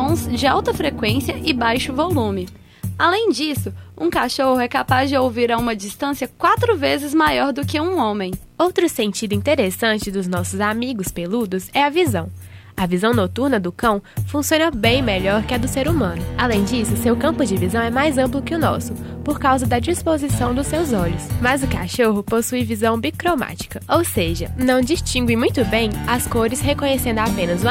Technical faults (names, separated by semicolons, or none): none